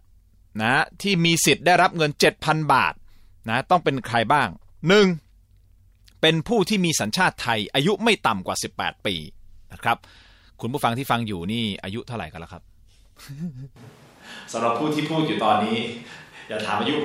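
A speech recording whose sound turns abruptly roomy and hollow at 13.76 s and stays that way to the end, thinner in the bass, with background noise roughly 30 dB below the voice and almost no level change. The likely cause is a switch to a distant microphone after the close one dropped out.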